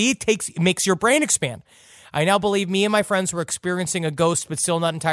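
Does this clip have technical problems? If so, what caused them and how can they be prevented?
No, the speech signal shows no technical problems anywhere in the clip, so there is nothing to trace to a cause or to prevent.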